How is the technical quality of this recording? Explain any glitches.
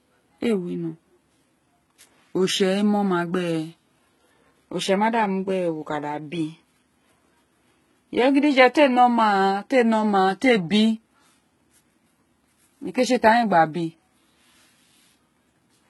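The quality is poor, with heavy coding damage running through the whole recording. Nothing is present above 11.8 kHz. The treble that remains sounds synthetic rather than natural. The s sounds come out gritty and lispy, with a metallic edge. The likely cause is HE-AAC compression at a very low bitrate, around 16 kbps. That codec keeps only the lower spectrum and rebuilds the highs by copying lower bands upward under a coarse envelope. The copied harmonics do not line up with the real ones, which produces the rough sibilance.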